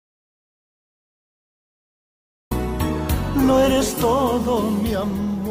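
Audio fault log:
0.00–2.51 s, audio dropout to silence: the clip opens already dead, with nothing at all for the first two and a half seconds, not even the faint hiss of a room, and then the sound arrives abruptly mid-flow at 2.51 s. That flat silence points to the input having gone missing, likely a dropped connection or a mute left on, while the recorder just kept writing blanks. Whatever happened before 2.51 s simply isn't there.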